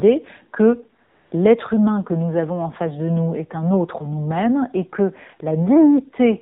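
Speech heard through the AMR narrowband mobile codec, with nothing above 4 kHz throughout. The codec damage is plainly audible: the voice has a buzzy, synthetic edge, which fits a low AMR-NB rate of about 7.4 kbps, where only a few pulses drive the vocal-tract model in each 5 ms subframe. That buzz is what separates it from simple telephone band-limiting, which would dull the top end but leave the voice natural. From 1.04 to 1.32 s there is AMR comfort noise. For about 280 ms the sender stopped transmitting speech frames, and the receiver filled the gap with generated noise. The real background is replaced by smooth, steady hiss that switches in and out at the gap's edges. A dropout would leave silence there, and packet-loss concealment would repeat or stretch fragments of the voice, so this even, featureless noise points to the comfort-noise mechanism.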